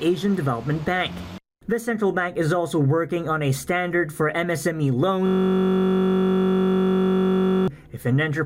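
A system hang loop runs from 5.27 s to 7.68 s. The audio locks onto one 21.33 ms fragment and repeats it exactly, well over a hundred times, which fits a 1024-sample ring buffer that the hardware kept replaying after the driver or computer froze. Because the fragment is so short, it fuses into a steady buzz at about 46.9 Hz rather than a stutter. Unlike a brief dropout or glitch, the sound neither stops nor varies. The identical cycle persists for over two seconds.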